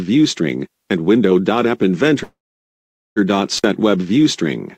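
At 2.23 s the sound stops moving forward and smears into a fading buzz that sinks into near-silence for most of the pause, about 0.81 s of it, before the audio resumes at 3.19 s exactly where it left off. That is a call audio freeze. The likely cause is that packets stalled in transit and the jitter buffer ran dry, so the receiver stretched the last fragment and then went quiet. Roughly 0.93 s of delay was inserted and nothing was lost.

From 3.57 to 3.65 s there is a brief crackle at both edges of a dropout, with the line falling to faint hiss for about 52 ms. This is an intermittent contact. A loose plug or cable momentarily broke the signal path, so the sound cut out abruptly rather than fading. The clicks mark the instants the connection opened and closed again.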